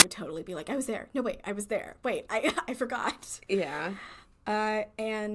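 Right at the start, at 0.0 s, the player treats the file tags as audio: an embedded cover picture is read as if it were sample data before the speech begins. Because the picture is compressed data, its bytes look essentially random, so they come out as very loud white noise. The result is a very brief, loud burst of static with hard edges, a sharp crack lasting only about 17 milliseconds before the speech starts.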